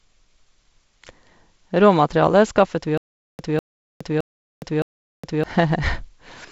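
A speech recording, band-limited near 7.7 kHz with light hiss consistent with G.722 wideband coding at 48 kbit/s, shows a stutter with silent gaps from 2.98 to 5.44 s, just after "skaffet vi". A 200 ms fragment repeats four times, each followed by about 415 ms of digital silence, giving a 615 ms cycle. This is likely a stalled stream replaying its last buffer on each retry. The intended audio for that span is lost.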